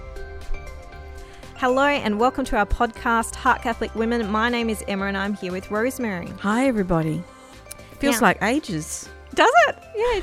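There are no technical faults to describe in time order.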